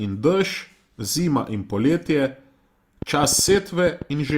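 From about 3.02 s to 4.31 s there's a train of clicks riding over the speech: roughly ten sharp, similar-sounding ticks, coming at around 7 per second but unevenly spaced, so it sounds like a stuttering pop rather than a steady tick. They stick out well above the speech, something like 10 dB hotter. The likely culprit is interference from nearby gear or a faulty connection or power supply spitting pulses into the signal.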